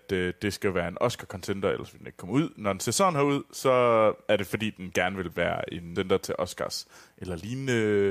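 At about 5.95 s, just after "den gerne vil være", the speech hits damaged data in a compressed stream: corrupted bytes make the decoder misread a frame and lose sync until it finds the next valid header, producing a brief glitch.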